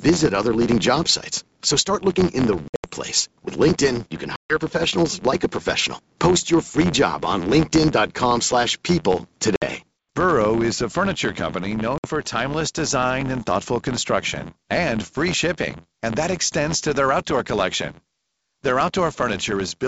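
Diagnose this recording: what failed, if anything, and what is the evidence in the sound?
A per-block filter restart in the driver or buffer stage runs through the whole speech clip as a steady 86 Hz buzz, which fits a 512-sample block. Each block's filter starts again from silence, so every block boundary carries a small transient. Mains hum would be a constant tone, but this buzz rises and falls with the speech level and vanishes in pauses. That shows it comes from the processing and not from the wiring.

Packet loss on an ADPCM call, at the network and codec stage, cuts hard-edged holes at 2.68–2.88 s and at 4.36–4.56 s. The second hole comes after "you can", and the speech resumes with "professionals like a professional". Both lose about 140 ms, about seven packets' worth. In the first, the loss is scattered over 160 ms, with runs of up to 80 ms. Shorter 60 ms gaps follow at 9.56–9.65 s, after "slash people", and at 11.98–12.06 s, between "is a furniture company" and "for timeless design and". 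A simple dropout would resume cleanly. Here the speech returns slightly distorted, then settles within tens of milliseconds, because the decoder's predictor and step size have to resynchronise. The 64 kbit/s G.722 wideband coding carries the speech up to 7 kHz with at most faint coding damage.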